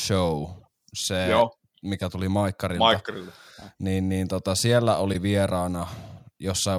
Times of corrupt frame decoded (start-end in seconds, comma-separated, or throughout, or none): 0.57-0.67, 5.13-5.16, 6.17